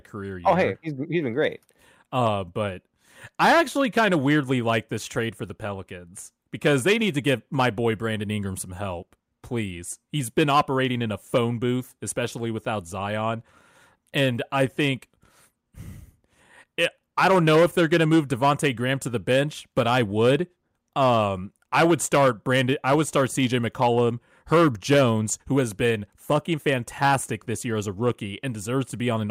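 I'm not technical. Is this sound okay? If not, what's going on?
Yes, it's fine: nothing in this recording sounds broken or glitchy, so there's nothing here you need to worry about.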